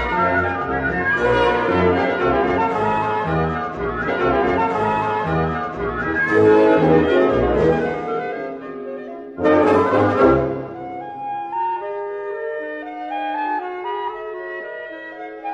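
A stream segment is repeated in this audio. From 4.04 s to 6.04 s, about 2.0 s of material plays a second time, as if the player fetched or queued the same chunk twice and then carried on. A small blip marks the jump back to the start of the repeated section. On a spectrogram, the same two-second block of patterns appears twice in a row, with a thin vertical discontinuity at the join. The waveform shows a matching duplicated envelope with an abrupt step at that seam.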